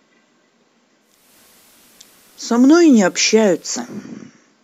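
At 1.0 s the speech blends over about 0.39 s from digital radio to analogue FM, bringing faint hiss and a level shift of about 1 dB, then blends back by 4.1 s.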